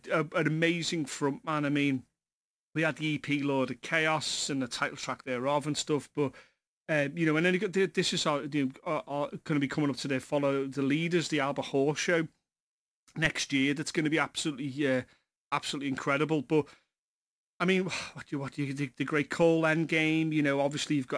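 Throughout the speech there is aliasing: content above 11 kHz was never filtered out before downsampling, which fits a drop from 48 kHz to 22 kHz, so it folds back as unrelated tones about 25 dB below the speech. Unlike a clean band limit, sibilants turn gritty and metallic rather than dull.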